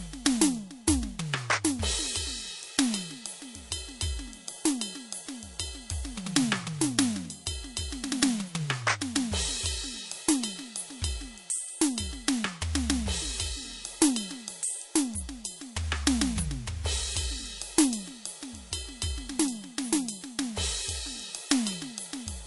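Throughout the music, detail swirls and chirps; this plainly audible damage is likely MP3 compression, fitting a bitrate near 48 kbps.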